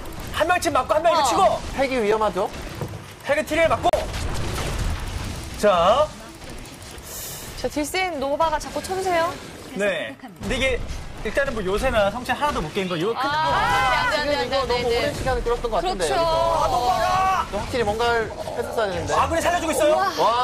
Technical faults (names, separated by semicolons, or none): block of digital silence